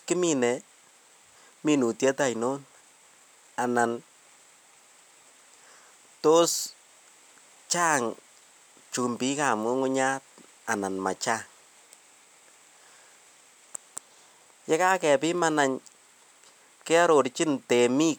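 Speech clip with one chunks-out-of-order glitch at 13.41 to 13.43 s. A 10 ms chunk arrived one chunk late and played after the one that should follow it, so nothing's missing, but you get a quick jumbled blip across the hard joins.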